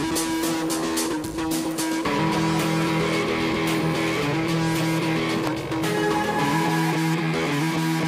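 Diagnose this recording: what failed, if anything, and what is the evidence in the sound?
Two sharp snaps sit on top of the sound, one at 1.71 s and a louder one at 5.47 s, peaking at around -15 and -10 dBFS. Each is a brief, hard transient that ignores whatever else is going on, which points to an electrical switching spike in the analogue wiring. A nearby switch, motor or static discharge likely arced and the audio line picked up the burst.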